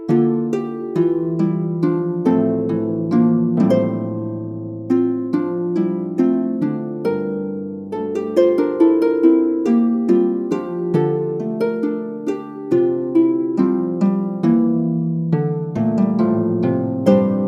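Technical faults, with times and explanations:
No technical faults can be heard anywhere in the signal.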